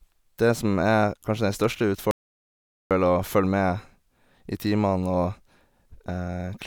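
An audio dropout to silence hits this speech from 2.11 to 2.91 s, about 0.8 s of silence with no room tone, likely from lost input while recording continued.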